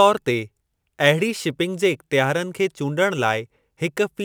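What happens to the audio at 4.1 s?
At 4.1 s, as across the whole speech clip, the converter's sampling clock wanders by a few microseconds, so samples land slightly off time. That sample clock jitter adds a rough, hissy error around 30 dB below the speech, strongest on loud, bright sounds.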